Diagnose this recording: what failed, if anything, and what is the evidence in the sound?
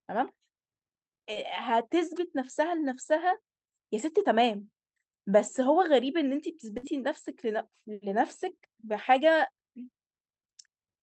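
A brief smear at 1.33 to 1.37 s is short concealed packet loss on the network. The decoder stretched the preceding sound for about 21 ms, then rejoined.

At 6.77 to 6.85 s, a held, fading sound precedes a jump forward. This is a burst of packet loss: about 60 ms went missing, bridged by decaying extrapolation.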